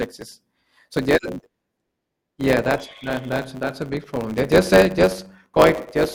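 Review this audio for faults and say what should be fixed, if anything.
There's a block size mismatch (truncated) through the whole speech clip. A steady 100 Hz buzz sits under everything, and the delivery runs about 1.07 times fast at roughly normal pitch. The end of each block is being dropped, which fits 512-sample blocks being written into a stage that reads shorter ones. To prevent it, make both stages agree on the block size, or buffer between them so nothing gets discarded.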